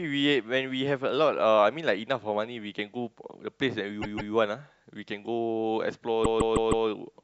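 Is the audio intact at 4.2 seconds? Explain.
No. From 4.01 to 4.33 s the speech stutters: a short stretch of about 0.16 s plays three times in a row. These are repeated frames, with a run of compressed frames delivered again so the decoder replays them, adding about 0.31 s.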